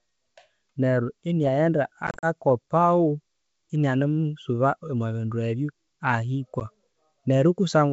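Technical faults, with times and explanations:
2.07–2.26 s and 6.60–6.65 s, packet loss on an ADPCM call. The first burst drops about 100 ms in scattered holes, the longest 40 ms. The second drops 10 ms. Each hole is silent with hard edges. The decoder's predictor and step size lose track, so speech resumes with brief distortion.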